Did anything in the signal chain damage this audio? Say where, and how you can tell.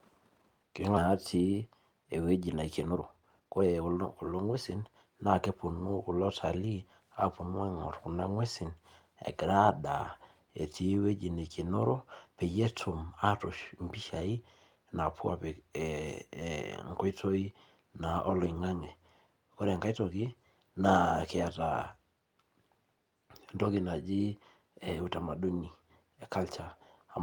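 Yes. Skip ahead at 0.97 to 0.99 s, in the network and jitter buffer stage. The speech jumps forward with no gap at all, and the sounds on either side of the join belong to different moments, so about one and a half seconds of audio is simply missing. A stretch was dropped in transit or discarded from the jitter buffer while later audio was already queued, and playback spliced the two sides almost directly together.

Jitter buffer speed-up from 1.07 to 7.01 s, in the same buffer stage. For about six seconds the speech runs at roughly 114% of normal rate, yet the pitch stays put, so it sounds hurried rather than chipmunk-like. Having built up excess delay, the receiver trimmed short pitch-period-sized pieces over and over to catch up, removing about a second of audio in total before settling back to normal pace.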